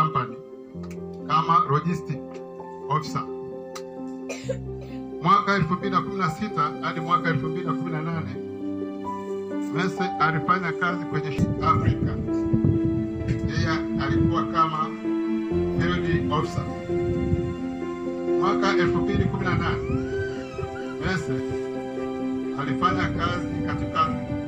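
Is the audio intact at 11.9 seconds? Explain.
Yes, the audio at 11.9 seconds plays through cleanly, with no dropout, click, distortion or other fault audible at that moment.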